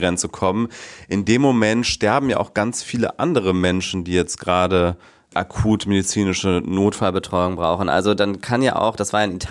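Wrong sample rate from 7.02 s to the end at 9.51 s: the final stretch of speech is played back faster than it was captured, with no resampling to compensate. Speed and pitch rise together by a factor of 1.09, which fits material recorded at 22 kHz being played at 24 kHz. The voice sounds about 1.5 semitones higher and slightly hurried, with a slightly chipmunk-like brightness that sets these last seconds apart from what precedes them.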